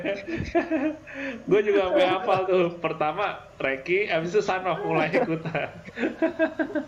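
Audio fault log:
Nothing here to log: I listened through and didn't catch a single glitch worth a line.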